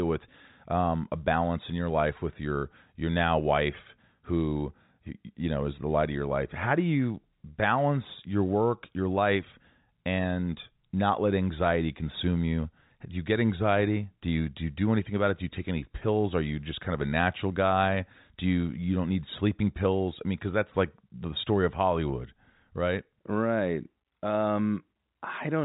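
No technical faults can be heard in this speech clip. The G.711 telephone coding shows as a narrow band with nothing above about 3.8 kHz, and any coding damage is faint at most.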